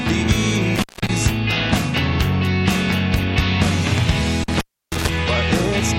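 Intermittent contact cuts the sound at 0.75 to 1.10 s and 4.44 to 5.09 s. A loose connection opens for 201 ms, then 311 ms. Crackle marks the edges, with faint hiss between.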